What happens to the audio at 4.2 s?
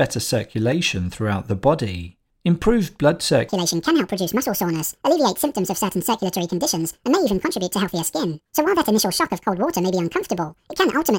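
At 4.2 s the speech is inside a section at the wrong speed, running from 3.49 s to the end of the clip. It plays 1.81 times too fast, likely because that stretch was fed to a player or editor set to the wrong clock. Pitch rises by roughly ten semitones and syllables rush together at once. Unlike a pitch-shift fault, where only pitch moves, here tempo and pitch change together.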